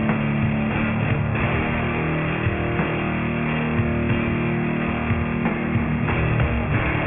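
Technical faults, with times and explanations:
throughout, aliasing: the sample rate seems to have dropped to about 6 kHz with no filtering first, so everything above 3 kHz folds back down as gritty, metallic tones at the wrong pitches. They sit only about 10 dB under the real sound and pile up against the 3 kHz edge.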